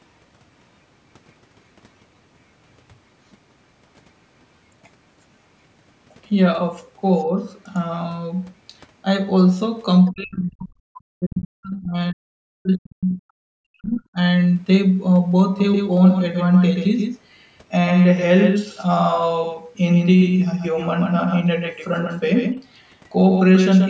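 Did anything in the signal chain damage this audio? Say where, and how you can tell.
Yes. Call processing is the likely stage for the other side's voice leaking through: from 10.05 to 10.13 s a brief scrap of a second voice sits faint, roughly 25 dB under the speech. Unlike a doubled track, it's a different voice, not a copy of the talker.

Call processing is also where the speech was likely suppressed in double talk. From 10.13 to 14.19 s, about four seconds, the talker's level drops, at worst by around 40 dB. It tracks the other side talking, which distinguishes it from a network dropout's abrupt silences.

A doubled audio track likely comes from capture or editing, with a second path recording the same signal. From 15.59 s to the end, a full-band copy trails about 150 ms behind, around 5 dB quieter. It has no decay or room colour, so it isn't a real reflection.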